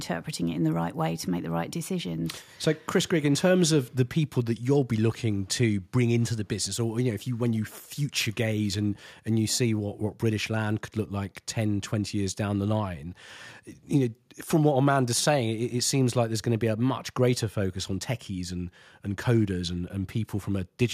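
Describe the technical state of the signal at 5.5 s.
At 5.5 s the speech signal is intact, with no audible technical fault at that moment.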